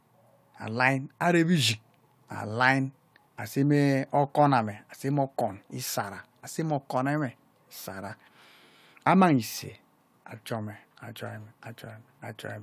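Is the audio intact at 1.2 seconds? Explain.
Yes, the speech at 1.2 seconds is intact, with no dropout, glitch or other audible fault at that moment.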